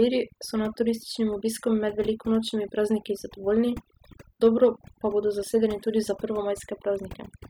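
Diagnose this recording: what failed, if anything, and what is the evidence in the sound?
Overdone noise removal at the call-processing stage, present across the whole speech recording. Bands near the suppressor's noise estimate are pulled nearly to silence, so the background drops away leaving twinkling specks. A spectrogram would show scattered isolated blobs between phrases and ragged, holed speech harmonics.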